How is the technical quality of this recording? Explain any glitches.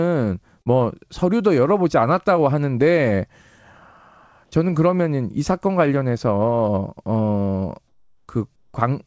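The recording has three short glitches: one early dropout in the speech and two spots near the end where the background is replaced.

At 0.62 to 0.68 s there is a brief smear, a roughly 40 ms stretch where the sound seems to hang on and wobble before the real audio returns. This is short concealed packet loss. About 40 ms of the call never reached the decoder in time. The receiver covered the gap by extending the preceding sound and then blended back into the real signal, so nothing goes silent but the detail in that moment is lost.

From 7.88 to 8.28 s, and again from 8.56 to 8.74 s, the quiet background between phrases turns flat and steady, losing its natural texture. It drops by about 10 dB in the first gap and about 6 dB in the second. This is comfort noise in place of the background. During these pauses, when the room sits about 50 dB below the loudest speech, the sender likely stopped transmitting, and the receiver generated synthetic noise shaped roughly like the room (RFC 3389 style) until the sound resumed.

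Throughout, the audio has no content above 8 kHz, which points to a wideband call codec such as G.722 on the call path.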